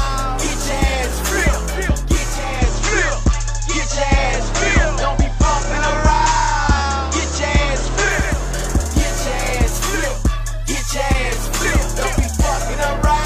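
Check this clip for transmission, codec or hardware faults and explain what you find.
One fault is present. From 2.26 s to 8.47 s, the digital radio is blending to analogue. The receiver lost its digital signal and cross-faded over 0.45 s to the station's FM broadcast, then back again. During the FM stretch, hiss sits around 30 dB below the signal, and the level shifts by about 1 dB.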